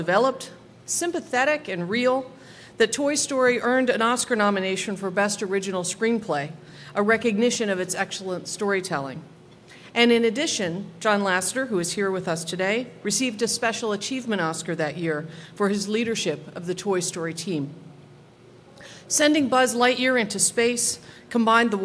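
Nothing goes wrong anywhere in the recording; there's simply no technical fault to point to here.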